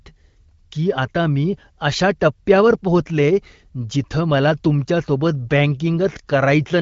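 Nothing in this speech clip stands out as a technical fault. It has passed through the AMR wideband (HD Voice) codec at 15.85 kbit/s, which leaves only light coding colour and nothing above about 7.6 kHz.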